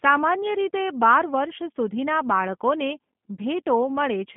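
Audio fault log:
Throughout: G.729 codec. The speech is carried through a narrow telephone band of roughly 150 Hz to 3.5 kHz, so it sounds thin and boxy with no upper sibilance. The codec models the voice with a vocal tract filter, a pitch predictor and a few coded pulses per frame instead of the actual waveform, which leaves a plainly audible rough, buzzy, synthetic edge on the speech that fits an 8 kbit/s G.729A-type link.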